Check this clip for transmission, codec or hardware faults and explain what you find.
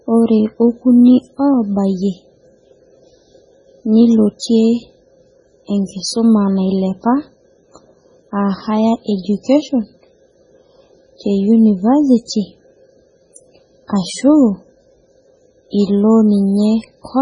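Two faults are audible: heavy lossy-codec damage across the whole clip and one pre-echo.

MP3 compression runs throughout: nothing sounds above 10.4 kHz, and the speech sounds watery and swirly as weak frequency components drop in and out between frames. The likely cause is MP3 coding at a very low bitrate, fitting roughly 16 kbps, starving the encoder of bits.

Pre-echo appears at 4.39 to 4.42 s. Quantisation noise, spread across a transform block containing a sharp attack, fills the quiet 27 ms before it. This produces a brief hiss that runs ahead of the onset and softens it.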